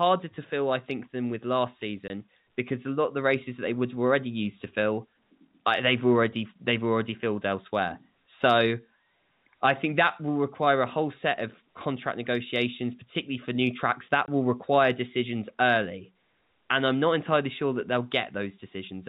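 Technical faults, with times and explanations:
2.08–2.10 s and 14.26–14.28 s, packet loss filled with silence: the speech drops out for 20 ms in each place, first between "think than with last" and "because a lot of", then just before "will require decisions early". Each gap matches the length of one lost 20 ms packet. The receiver had nothing to play for that interval and inserted silence instead of concealing it, so the signal stops abruptly and restarts at hard edges. The G.711 telephone coding limits the audio to telephone bandwidth.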